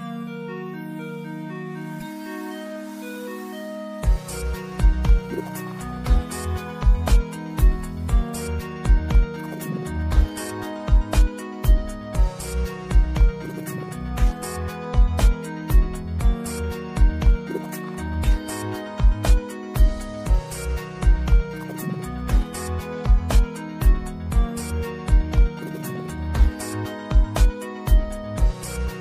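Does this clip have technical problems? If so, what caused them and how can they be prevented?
Yes. The sound is watery and swirly throughout, with metallic chirps on bright, hissy parts and smeared attacks. The likely cause is MP3 compression at a bitrate near 64 kbps. Short of bits, the encoder cuts the treble at a fixed frequency and drops weak lines that flicker between frames. A spectrogram shows a flat ceiling with speckled holes beneath it. Encoding at a higher bitrate or keeping a lossless master prevents this.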